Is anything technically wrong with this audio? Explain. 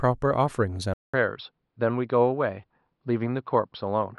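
Yes. From 0.94 s to the end, after a 200 ms silence, the speech loses everything above 5.4 kHz, drops a few decibels and gains a faint new noise floor, likely an input switched to a poorer device. The gap and changed noise distinguish it from a simple filter.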